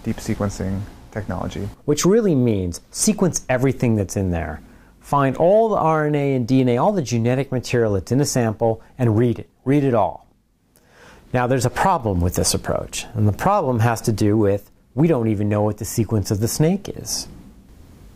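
The signal holds together throughout, with no audible faults anywhere in the sound.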